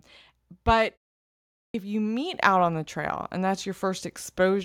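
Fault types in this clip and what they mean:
Clipped start after a pause: at 1.70 s, after about 0.8 s of silence, the output device wakes late and swallows roughly 43 ms, so speech begins abruptly.
Microphone volume stepped up: at 2.34 s the input volume is raised in one step, and voice and background jump together by about 7 dB.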